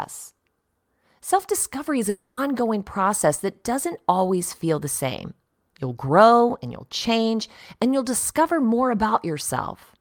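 A speech clip with one long network dropout from 2.09 to 2.39 s, between "discovery is" and "process that doesn't always". For about 0.28 s the last sound is stretched into a fading buzz or hiss. Then speech resumes with that stretch missing. The likely cause is lost network packets.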